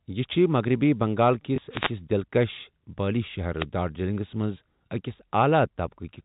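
At 1.56 to 1.58 s there is packet loss with the last packet repeated. 20 ms of speech went missing, which fits a single lost 20 ms packet, and the receiver replayed the preceding stretch. It sounds like a small blip rather than a gap of silence or a dropout of noise.

Wireless microphone noise hits follow at 1.70 to 1.92 s and 3.58 to 3.66 s. In each, the FM radio link faded as reflected paths cancelled, and receiver noise rose over the speech as a short swish of static. Unlike the packet fault, nothing is repeated: broadband hiss briefly rises. The G.711 telephone coding, heard as the 4 kHz band limit, is a normal part of the chain and not a fault.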